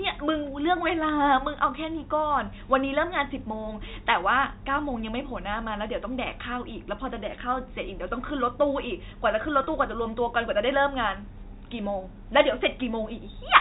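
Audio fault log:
9.64–9.67 s, packet loss with pitch repetition: 30 ms of packets went missing, and the last pitch period was repeated across the gap, giving a brief buzzy hold.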